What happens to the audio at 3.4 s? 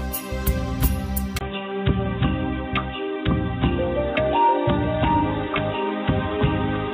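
At 3.4 s you're in the dull stretch that runs from 1.39 s to the end. There's a 20 ms gap at 1.39 s, then nothing above 3.8 kHz, a faint new hiss, and an unchanged level. The likely cause is the input switched to a poorer device.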